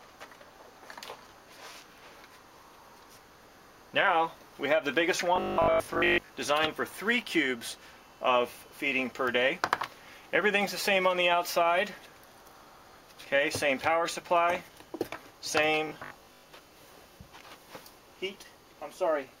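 From 5.36 to 6.30 s and 15.87 to 16.53 s, robotic sound from repeated short buffers leaves a metallic 50 Hz buzz, likely a 20 ms buffer replayed over skipped audio.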